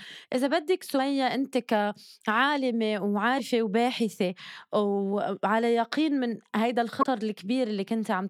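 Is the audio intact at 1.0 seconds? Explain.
No. Damaged data in a compressed stream runs from 0.96 to 1.00 s, ending right at the moment asked about. A short stretch of the encoded speech is corrupt, so the decoder misreads or rejects the frames there, loses its place in the stream and has to hunt for the next valid frame header before decoding cleanly again. That breakdown is heard as a brief disturbance lasting about 44 ms, a chirp, squawk, click or short hole cutting across the speech just before 1.0 s.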